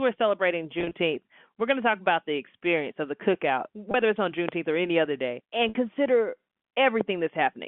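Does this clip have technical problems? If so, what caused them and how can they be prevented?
Yes. Network packets went missing at 0.79–0.93 s (about 90 ms lost in runs no longer than 30 ms), 3.91–3.94 s (30 ms) and 5.69–5.75 s (60 ms). Packet loss with pitch repetition means the receiver filled each gap by looping the last pitch period, which is heard as brief held, buzzy stretches. Prioritising voice traffic and adding forward error correction or a deeper jitter buffer would prevent this.

A loud pop lands at 4.49–4.51 s, peaking about 20 dB above the speech, and another at 7.01–7.03 s, about 15 dB above. Each is likely a sudden voltage step from a connector, switch or static discharge, heard as a sharp click over the continuing speech. Secure cabling, grounding and muted switching would prevent these.

The G.711 telephone coding limits the sound to the 150–3400 Hz line band, as expected for a phone connection.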